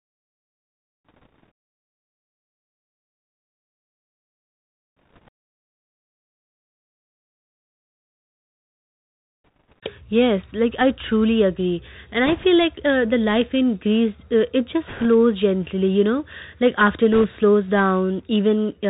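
The whole thing comes through a Bluetooth CVSD headset codec, which fits a 64 kbps link. Nothing gets above 4 kHz, the s sounds turn scratchy, loud bright bits distort as the one-bit steps can't keep up, and a grainy hiss sits underneath the speech. On top of that, there are bursts of bit errors on a Bluetooth voice link at 1.05–1.51, 4.97–5.30, 9.44–9.79, 12.26–12.45, 14.88–15.06 and 17.13–17.25 s. A few percent of bits get flipped, so you hear a rushing crackle rather than clicks.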